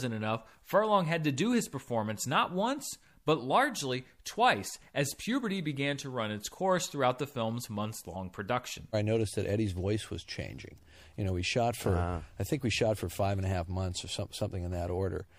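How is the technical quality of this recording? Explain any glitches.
The recording has two faults: compression damage across the whole speech clip, and one brief glitch near the middle.

Throughout, the speech sounds watery and swirly, with dulled treble and smeared consonants. This is likely MP3 compression, with the damage plainly audible and fitting a bitrate around 64 kbps.

At 8.14 s, between "throughout the film's months" and "production I noticed that", there is a short glitch from a corrupt frame decoded. Flipped bits put energy at the wrong frequencies for one frame, peaking at roughly -35 dBFS.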